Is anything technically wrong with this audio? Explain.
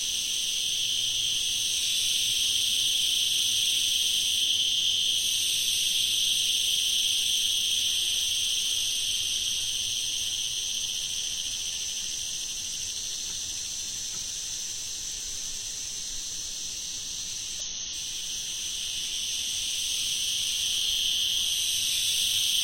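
Yes, there is one fault. From 17.60 to 17.63 s, damaged data in the compressed stream makes the decoder lose sync and resync, producing a brief glitch, seen as a broadband smear and waveform discontinuity.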